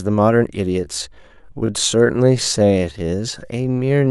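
At 0.82 s the pace suddenly drops and stays slow to the end: a time-stretched section running at about 0.685 times the original speed while the pitch holds steady. The likely cause is software lengthening the audio to fill a set duration by repeating short slices, which leaves the slowed stretch dragging. A slowed tape or wrong sample rate would drag the pitch down with the pace, and here it does not.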